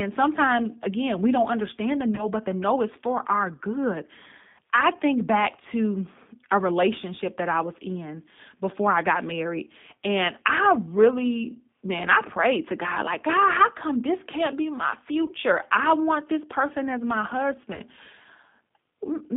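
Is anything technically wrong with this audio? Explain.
Yes, the speech has two problems: a low-rate speech codec throughout and three brief dropouts.

The G.729 codec (the G.729A variant) affects the whole clip. It does not send the waveform itself. It sends a vocal tract filter, a pitch predictor and a few pulses per frame, and the decoder rebuilds the voice from those. The sound points to an 8 kbit/s stream. Content is confined to roughly 150 Hz to 3.6 kHz, so the result is narrowband, slightly rough and synthetic, with plainly audible codec damage.

VoIP packet loss concealed by the speech codec occurs at 2.15–2.27 s, 15.25–15.31 s and 17.74–17.80 s. Each gap is 30 ms, which fits a single lost packet. With no data arriving, the decoder extends its last pitch and filter settings while lowering the gain. Because each frame builds on the previous one, the effect lasts past the 30 ms gap itself. 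At each point the speech briefly turns into a buzzy tone or coloured noise that fades, and stays weak or smeared until it recovers.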